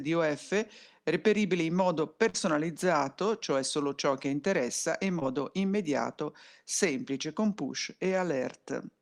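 Short concealed packet loss appears twice in this speech. At 2.29 s, about 40 ms of audio never arrived in time; the decoder bridged it with 45 ms of extrapolated sound, trimming 5 ms to stay in step, so a brief smear runs to 2.46 s. At 5.19 s a 20 ms loss is patched with 18 ms, heard as a quick wobble. On a spectrogram each patch shows a blurred continuation of the preceding sound with a soft seam where real audio resumes.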